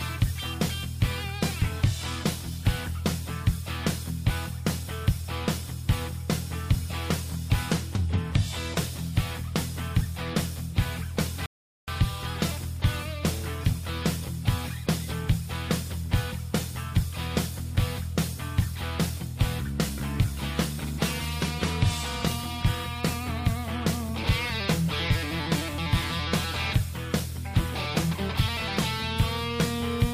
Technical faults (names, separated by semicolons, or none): rebuffering stall